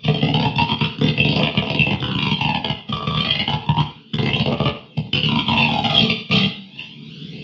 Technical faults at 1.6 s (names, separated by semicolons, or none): none